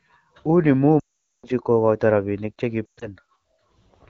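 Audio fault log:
0.99–1.46 s lost AMR speech frames: a 440 ms gap in which the decoder repeats the last good pitch and vocal tract settings with falling gain. The sound smears briefly, then quickly fades to silence, faster than narrowband would, and the speech returns weak or rough. That brief, decaying smear distinguishes it from a hard digital dropout.
2.85–3.07 s lost AMR speech frames: scattered losses over 160 ms, longest run 120 ms, giving warbles and a brief drop to near silence. The light 12.65 kbit/s wideband coding around it stays clear.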